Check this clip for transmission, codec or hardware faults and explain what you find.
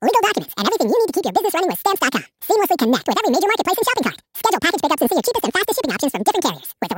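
One fault runs through the whole clip: the audio is read two samples at a time, so it plays at double speed. The reader takes each pair of samples as one frame, as if there were two channels or wider samples. The speech runs at 2x speed and an octave higher.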